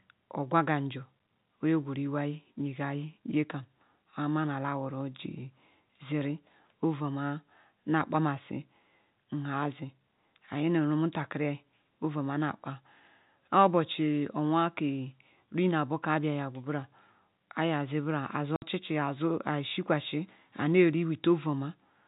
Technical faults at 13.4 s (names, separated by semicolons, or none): none